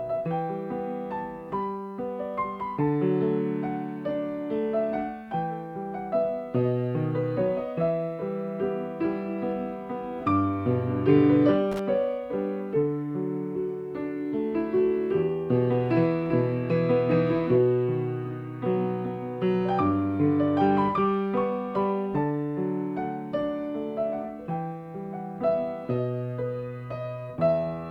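At 11.72 s a brief burst of loose connector crackle breaks in. It lasts until 11.79 s, about 80 ms. A worn or dirty contact somewhere in the signal path is making and losing contact as it shifts. Each break chops the audio for an instant. Any DC present on the line turns those breaks into pops. The result is an irregular, scratchy crackle laid over the sound, short.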